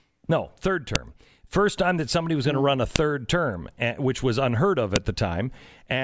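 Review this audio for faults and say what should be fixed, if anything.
A file header played as audio: the 2-second speech chunks were joined with their WAV headers intact, so header bytes play as samples, giving sharp clicks at 0.95, 2.96 and 4.96 s. Strip each chunk's header before concatenating or streaming the raw sample data.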